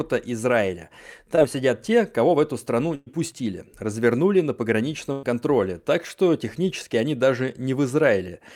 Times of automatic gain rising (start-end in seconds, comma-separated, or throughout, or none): none